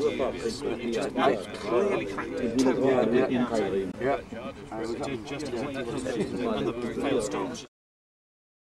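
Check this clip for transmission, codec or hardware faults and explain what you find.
There's one short gap. From 3.91 to 3.94 s the sound drops to silence and then carries on as if it had kept playing. That's likely a Bluetooth dropout: a late packet got discarded, and roughly 15 ms of missing audio fits a single lost frame.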